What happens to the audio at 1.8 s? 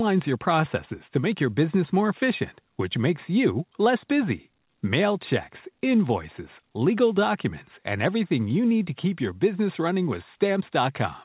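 Nothing goes wrong at 1.8 s: the speech carries on intact through that moment, with only the narrow, telephone-like band of the call path, which has nothing above about 4 kHz.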